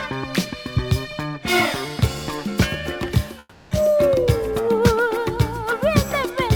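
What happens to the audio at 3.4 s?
At 3.39 s the sound smears into a fading buzz for about 0.32 s, goes briefly silent, then resumes at 3.73 s with that chunk gone, likely a long network dropout.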